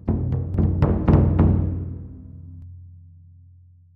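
From 0.54 s to 2.62 s the sound is doubled. A second, full-band copy runs about a third of a second behind the original, at roughly the same loudness. This is a doubled audio track. It is likely caused by the same signal reaching the mix twice, once through a slower path. The copy carries no decay or room colour. It cuts in and out abruptly at both ends, heard as a clean, hard echo.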